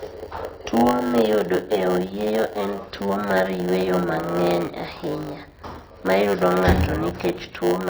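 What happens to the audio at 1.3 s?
At 1.3 s the speech carries a steady 100 Hz buzz and runs slightly slow. This is a block size mismatch (padded), present for the whole clip: each block handed on is shorter than the block read, and the remainder is filled with silence. The speech plays at 0.919 times normal speed with timbre unchanged, which separates it from a sample-rate error that would drag pitch down too.

Over the same span the speech sounds watery and dull, with s sounds turning swirly and chirpy. The likely cause is heavy MP3 compression, consistent with a bitrate around 24 kbps: the encoder cuts the treble and drops weak frequency lines frame by frame. A plain low-pass filter would dull the sound without that swirl.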